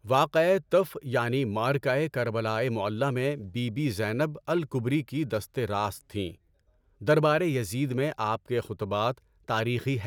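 No technical faults can be heard anywhere in this speech.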